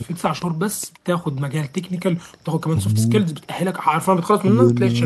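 No technical faults occur in the clip, so there are none to describe in time order.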